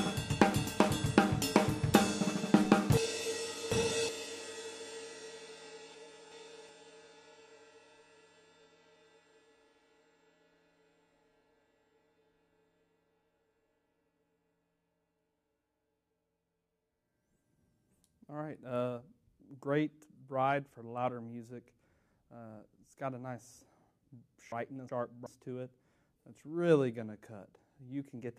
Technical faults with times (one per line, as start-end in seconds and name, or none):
2.97-4.09 chunks out of order
5.94-6.69 chunks out of order
24.52-25.26 chunks out of order